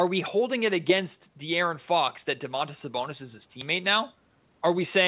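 Nothing in this speech recording sounds faulty.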